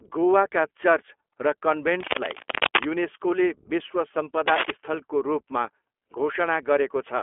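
The speech runs through the iLBC codec from start to finish. Nothing above about 3.8 kHz survives, and the line band sits near 300 Hz to 3.4 kHz. The codec damage is plainly audible. Voices turn rough and slightly synthetic. Each 20 ms frame is coded on its own, which fits the 15.2 kbps mode.

Cable scratch noise breaks in from 2.00 to 2.86 s, just before "युनेस्कोले विश्व". It returns from 4.48 to 4.71 s, between "युनेस्कोले विश्व" and "स्थलको रूपमा". Both bursts are dense, uneven crackling and rustling. They sit roughly as loud as the speech itself. The likely cause is a worn cable or connector being moved, so its contact resistance jumps rapidly.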